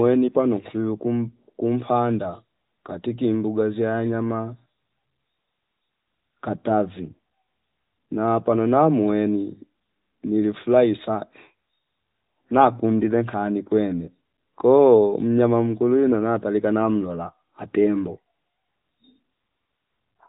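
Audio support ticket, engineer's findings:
Nothing stood out on listening; the speech arrives over the AMR narrowband mobile codec path at 12.2 kbps, with no content above 4 kHz, as expected for that link.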